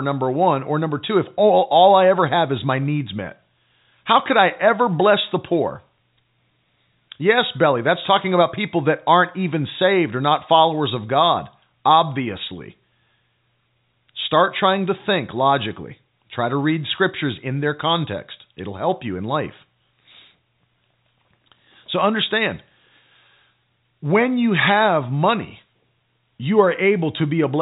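No technical faults are audible.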